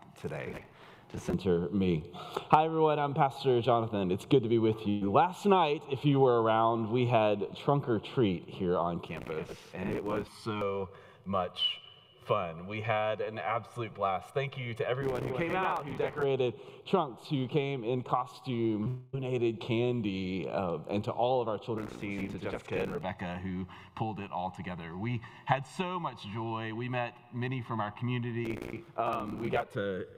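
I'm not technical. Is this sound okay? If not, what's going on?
No. There are three problems.

From 4.89 to 5.03 s there is a burst of packet loss. A small run of data arrived too late. The player stretched the last sound into a fading buzz or hiss for about 0.12 s. Then the sound resumes, with about 0.12 s skipped.

At 18.83 to 18.88 s there is a short concealed packet loss. A tiny piece, about 20 ms, went missing. The player patched it by continuing the previous sound, so you hear a brief smear or wobble rather than a gap.

Straight after, from 18.88 to 19.15 s, the sound turns into a held buzz or hiss that fades for about a quarter of a second. The sound then picks up further along, with about 0.26 s gone. This is likely a long network dropout.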